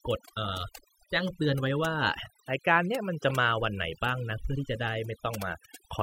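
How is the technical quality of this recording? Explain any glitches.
The technical quality suffers from overdone noise removal across the whole recording. The denoiser cuts any frequency band near its noise estimate, taking quieter speech detail with it, so the background drops and breaks up into twinkling specks, unlike a noise gate's whole-signal dropouts.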